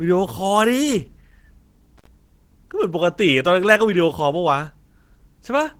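Throughout, the speech has likely passed through Opus compression at a low rate, one that points to roughly 16 kbps, with the encoder in its hybrid speech mode. The damage is plainly audible, a muffled, hoarse quality, though the band still reaches about 20.4 kHz.

From 1.98 to 2.07 s, an intermittent contact, a loose cable or plug, breaks the signal path for about 61 ms. The speech drops out with crackle at both edges of the gap, leaving faint hiss while the line is open.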